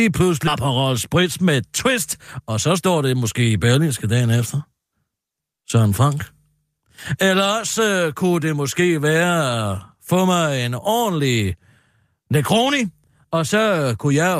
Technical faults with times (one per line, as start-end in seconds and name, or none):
0.47-0.49 skip ahead